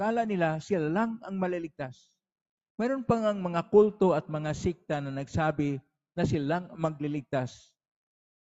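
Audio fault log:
No faults found; the sound carries the expected character of call microphone processing and a WebRTC call path, with nothing above 8 kHz.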